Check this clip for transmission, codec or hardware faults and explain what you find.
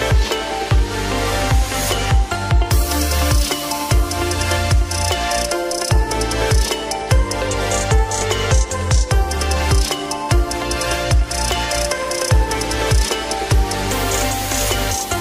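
Nothing technically wrong can be heard at any point in the clip; the signal stays continuous and stable throughout.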